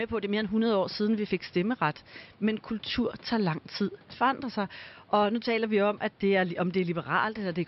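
No technical faults are audible anywhere in this recording.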